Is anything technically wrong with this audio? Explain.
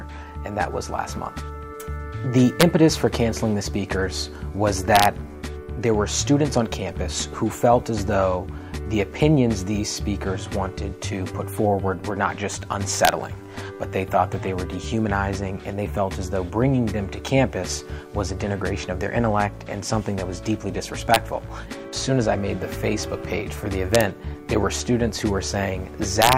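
Yes. Integer overflow appears at 2.61, 4.96–5.05, 13.05–13.09, 21.14, 23.95–24.01 and 26.22–26.33 s. Peaks exceeding the integer limit, by up to about 3 dB, wrap to the opposite sign instead of being limited, producing cracks. The waveform shows peaks flipping across the full range; a spectrogram shows broadband vertical streaks.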